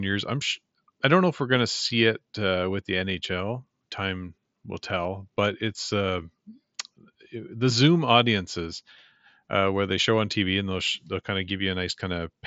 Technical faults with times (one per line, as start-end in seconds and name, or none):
none